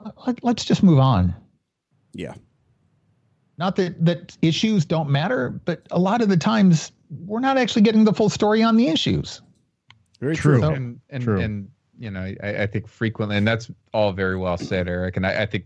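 Nothing technical goes wrong anywhere in this speech recording, so there's no fault to point to at any moment.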